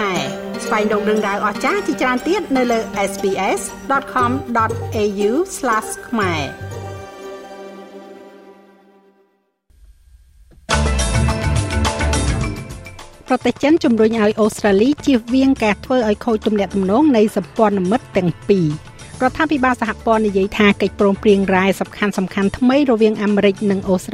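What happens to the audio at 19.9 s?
Nothing goes wrong at 19.9 s; the audio is intact at that point, with no dropout, click, glitch or other audible fault.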